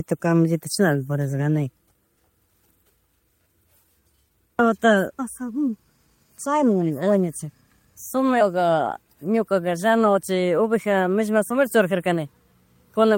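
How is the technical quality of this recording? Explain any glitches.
The recording has no glitches to explain. No technical fault can be heard anywhere in the speech.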